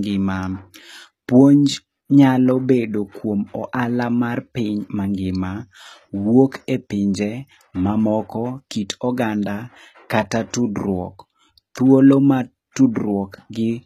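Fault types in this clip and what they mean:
HE-AAC compression: The speech carries plainly audible codec damage throughout, likely from HE-AAC at a low bitrate around 20 kbps. Only the lower spectrum is truly coded; the treble is rebuilt by copying lower bands upward, so s sounds come out gritty and lispy. On a spectrogram the upper band looks like a smeared, blocky echo of the region below, its harmonics misaligned at the crossover, and nothing appears above 14.8 kHz.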